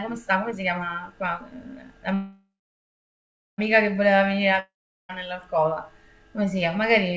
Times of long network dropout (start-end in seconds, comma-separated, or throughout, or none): 4.60-5.11